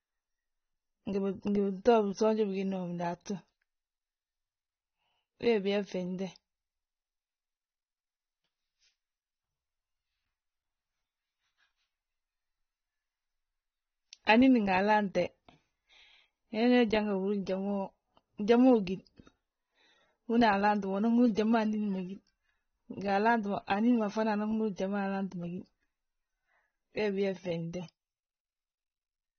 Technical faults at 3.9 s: AAC compression

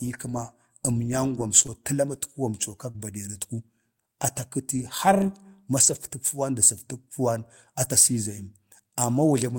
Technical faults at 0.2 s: none

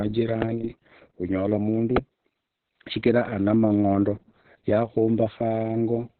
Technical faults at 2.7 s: Opus voice compression

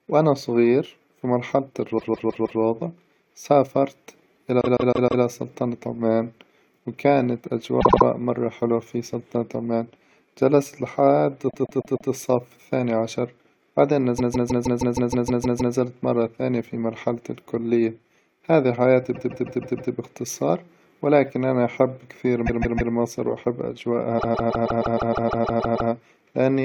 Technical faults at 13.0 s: none

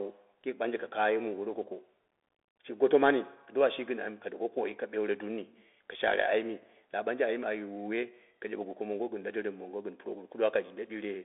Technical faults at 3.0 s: Bluetooth CVSD headset codec

